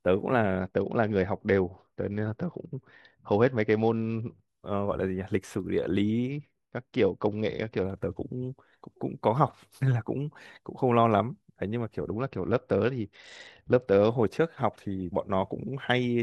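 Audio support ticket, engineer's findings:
Bluetooth SBC bit pool drop, 0.60–4.48 s, 6.31–7.84 s, 12.12–14.10 s. Speech treble dulls, gritty noise rises, then recovers. Link congestion starves the top sub-bands and coarsens the rest. The sound fits a bit pool falling from 31 to 9, roughly 72 kbps.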